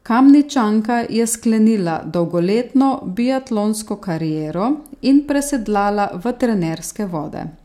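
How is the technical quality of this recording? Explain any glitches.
The technical quality of this recording is good, with no glitches to explain.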